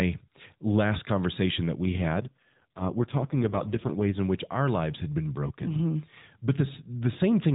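A speech clip carried over a narrowband mobile AMR-NB link shows an AMR rate drop from 1.90 s, after "last conversation that we", to 4.18 s, before "in which our lives". The voice turns buzzier and more synthetic, which fits the codec dropping from 12.2 to 4.75 kbps on a weak radio link. On a spectrogram the band stays capped at 4 kHz with no gap, but the harmonics blur into coarser, smeared energy. The waveform runs unbroken.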